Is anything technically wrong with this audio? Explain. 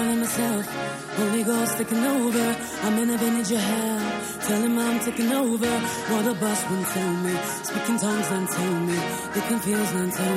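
No, nothing technically wrong can be heard in this audio. There are no faults to point to anywhere in the recording.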